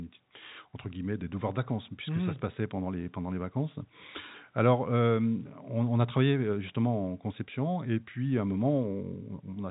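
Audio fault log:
The speech sits in a telephone band with nothing above 3.8 kHz, which fits ordinary G.711 mu-law coding at 64 kbps, and no faults are present.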